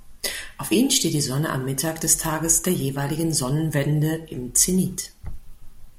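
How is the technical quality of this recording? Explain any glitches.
No glitches can be heard anywhere in the speech, and the signal stays intact throughout.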